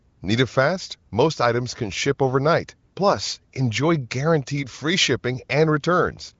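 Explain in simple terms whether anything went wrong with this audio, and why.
Nothing went wrong with this recording. It has the sound of an HD Voice phone call, with little or no damage from the phone's compression, and like any such call it carries nothing above about 7.5 kHz, so the very highest treble is missing.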